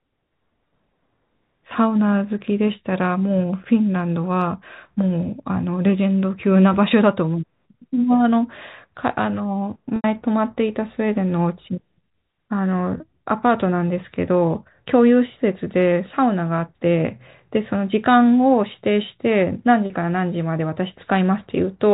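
Packet loss with pitch repetition: audio packets dropped at 9.96 to 10.04 s, 12.98 to 13.00 s and 19.86 to 19.90 s, and the receiver repeated the last pitch period, so the speech briefly holds a buzzy note, the 80 ms gap fading toward silence while the 20 ms and 40 ms gaps stay bridged, matching the loss of 20 ms packets. The narrow 4 kHz telephone band of the G.711 coding is still audible around these gaps.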